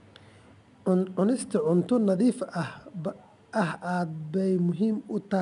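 Speech carrying 4-bit ADPCM compression throughout: a gritty hiss rides on every loud stretch and fades with the level, unlike the swirly, warbling artefacts of a perceptual codec. Nothing sounds above 10.7 kHz, which fits a reduced sample rate, at a bitrate near 88 kbps.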